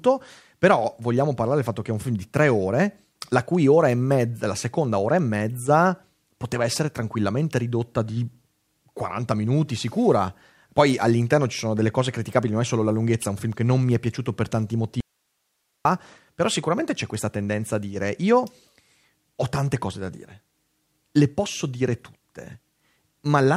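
Speech cuts abruptly from 15.00 to 15.85 s in an audio dropout to a faint residue, likely a lost feed. Only hiss about 50 dB down remains, a sharp-edged, near-flat gap on waveform and spectrogram.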